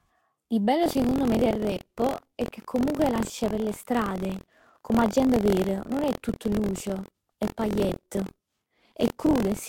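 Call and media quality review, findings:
Swirly, hollow, smeared speech throughout. Nothing above 16.8 kHz. Likely generation loss: repeated lossy re-encoding, around three passes, fitting Vorbis near 80 kbit/s.

Buffer tearing from 0.81 s to end. Robotic 43.1 Hz buzz, fits a 1024-sample buffer. Roughly a tenth of each period replays audio about 50 ms old.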